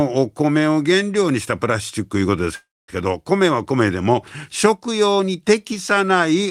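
At 2.55 s the speech stops in a call audio freeze lasting to 2.90 s. The last sound smears into a fading buzz or hiss, then 220 ms of silence. Delayed packets likely emptied the jitter buffer. Speech resumes where it stopped, nothing lost, but 328 ms late.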